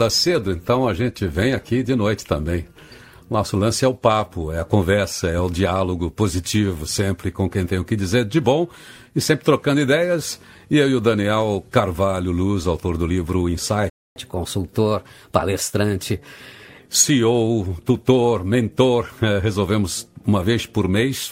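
At 13.90 s the audio cuts out abruptly and stays silent for about 260 ms, until 14.16 s, then resumes mid-flow. This gap is a playback stall, most likely the player running short of buffered data or having its output thread held up, so nothing reached the output until it recovered. From 14.16 s to 16.79 s the sound runs faster and higher, at 1.1 times normal speed with pitch raised by about a semitone and a half, then drops back to normal. This is catch-up at higher speed: the player resamples its backlog to play it quicker and win back the time lost in the stall, which raises speed and pitch together.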